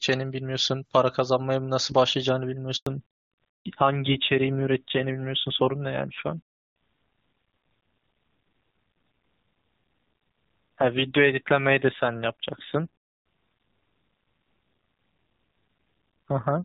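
At 2.77 s there's a handover gap: the call jumps between networks and no speech frames come through, so the voice cuts out for about 100 ms, to 2.87 s. Whatever was said in that slice is simply gone.

Right after, from 2.87 s to the end, you get a fallback to narrowband. Up to then the HD Voice sound is clean, with hardly any codec damage. After the handover, everything above 4 kHz disappears, and the speech turns duller and grittier, which points to a low-rate AMR-NB setting around 7.4 kbit/s.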